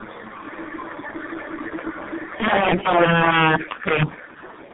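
From the start, the speech carries tandem speech coding: it sounds rougher, more muffled and more warbly than a single low-rate coder would leave it, which points to about three speech codecs in sequence, each re-encoding the previous one's degraded output, with nothing above 3.5 kHz.

From 2.40 to 4.03 s, integer overflow adds violent, sharp cracks on the louder syllables. With the signal driven about 12 dB past full scale, peaks wrap to the opposite sign instead of being limited, so each overshoot jumps across the whole range.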